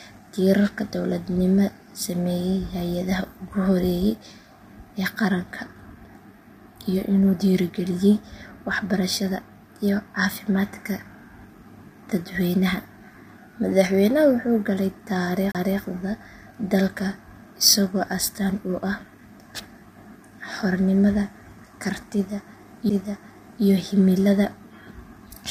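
Throughout, the speech sounds rough and grainy, likely from low-delay AAC compression at a low rate around 32 kbps; a spectrogram shows noise between the harmonics and a smeared upper band. A CD skip occurs at 15.52 to 15.55 s, just after "wuxuu galay": a tick, a short mute and a jump to another point, visible as a brief waveform gap. Another skip follows at 22.89 s with an even shorter mute.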